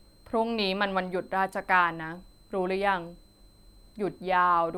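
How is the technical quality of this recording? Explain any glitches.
The speech is marred by one steady fault running throughout. A switching supply whistle sits near 4 kHz, wandering between about 4.02 and 4.18 kHz, roughly 40 dB below the speech. A power supply is likely cycling in an audible burst mode, giving a faint high whine. On a spectrogram it appears as a thin, slightly wavering horizontal line across the whole clip.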